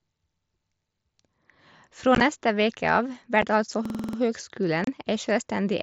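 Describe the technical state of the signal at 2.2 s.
Right around there, from about 2.15 to 2.21 s, you get unconcealed Bluetooth headset packet loss, just before "neste veke av". Packets between headset and phone went missing and nothing patched the gaps, so silence or an idle pattern sits where the sound should be. It's about 30 ms of holes scattered across 60 ms, the longest about 15 ms, which fits a handful of lost frames. It comes across as a brief run of short holes with hard edges, riding on the mSBC link.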